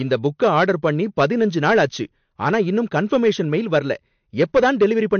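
From the start to the end of the speech, the louder syllables carry a gritty crackle, a brief roughness that rides on each peak and then clears. That is hard clipping: the signal runs about 5 dB hotter than the stage it passes through can hold, so the tops of the waveform are sliced flat. Only a small share of the samples are cut, which is why the damage sounds like crackle on peaks rather than a constant fuzz.

Running through the whole clip as well is a watery, swirling texture, with the treble stopping dead at 6.5 kHz so that s sounds lose their air and come out dull and chirpy. The likely cause is MP3 compression at a low bitrate, which fits something around 48 kbps. Starved of bits, the encoder discards everything above that fixed cutoff and drops quieter frequency detail that flickers in and out from frame to frame, giving the plainly audible smeared, underwater character.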